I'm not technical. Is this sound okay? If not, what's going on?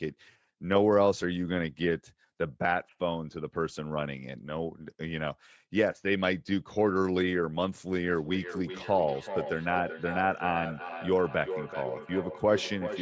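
No. Feedback echo between two devices starts at 8.09 s and runs to the end: a nearby device replays this microphone's sound, which gets picked up again, repeating roughly every 0.4 s.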